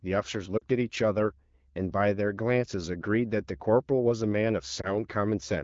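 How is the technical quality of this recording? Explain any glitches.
Two short dropouts mar the speech; both are lost AMR speech frames, heard through a wideband channel consistent with AMR-WB at 12.65 kbit/s or above. At 0.57 to 0.64 s the sound dips toward near silence, about 40 ms of missing audio, which fits two 20 ms frames. At 4.81 to 4.94 s a single-frame gap causes a shorter warble before the speech recovers. Radio errors corrupted those frames, so the decoder repeated the last good pitch and vocal tract settings with fading gain to bridge each gap.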